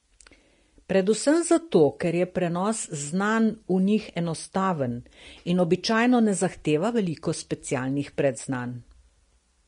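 Throughout, the speech sounds hissy and grainy, with nothing above 10.6 kHz, likely Vorbis compression squeezing the treble into noise, which fits a low bitrate.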